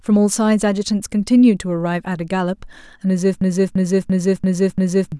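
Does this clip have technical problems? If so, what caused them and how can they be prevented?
Yes. A system hang loop occurs from 3.41 to 5.12 s. The system froze while the audio hardware kept replaying one 341 ms buffer, which fits an 8192-sample buffer, so the speech stutters in five exact repeats at about 2.9 Hz. Roughly a second and a half of audio is lost. To prevent it, use a driver watchdog that mutes output whenever the ring buffer stops being refilled.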